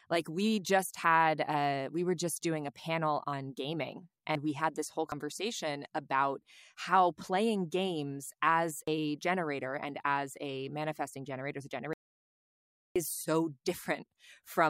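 At 4.35 s and 5.12 s the speech jumps ahead, likely a dropped buffer (overrun), each skipping roughly a tenth of a second with the edges joined directly. From 11.93 s to 12.96 s the signal cuts to total silence for about 1.02 s, likely an audio dropout to silence, with silence written while input was lost.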